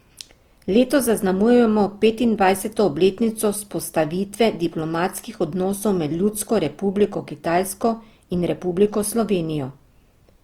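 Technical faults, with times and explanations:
Throughout, Opus compression: the speech sounds grainy and rough, with a noisy texture on sustained sounds, though the bandwidth stays full to about 20.2 kHz. This likely comes from the music-mode encoder filling starved bands with folded or noise energy, consistent with roughly 24 kbps.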